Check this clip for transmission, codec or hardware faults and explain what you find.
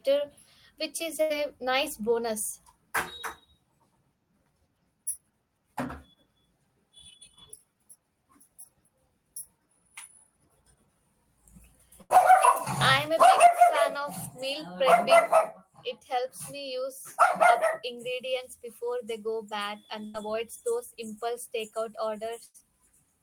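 Two transmission faults are present: four bursts of packet loss and one stretch of jitter buffer speed-up.

Burst of packet loss, at 1.21, 12.02, 20.05 and 22.46 s: each time the speech briefly freezes into a held, fading buzz or hiss for about 85 ms, then jumps ahead with about 60 ms of speech missing. Consecutive packets were lost, so the receiver extended and faded the last sound before resuming later in the stream.

Jitter buffer speed-up, from 20.21 to 22.74 s: the speech runs at about 102% of normal speed with unchanged pitch. The buffer held surplus audio, so the receiver trimmed many short pitch-period pieces, about 50 ms in total, to reduce the delay.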